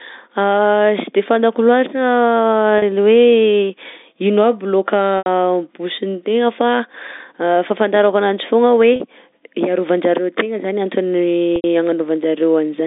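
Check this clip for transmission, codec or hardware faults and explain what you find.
The clip has one transmission fault, packet loss with pitch repetition, occurring four times: at 2.78 s and 8.96 s (each about 40 ms) and at 5.18 s and 11.56 s (each about 80 ms), consistent with runs of two and four 20 ms packets. During each gap the receiver loops the last pitch period and fades it, so the shorter gaps briefly hold with a buzzy quality, while the longer ones fade into silence before the normal signal resumes. The G.711 telephone band, roughly 200 Hz to 3.7 kHz, is audible throughout.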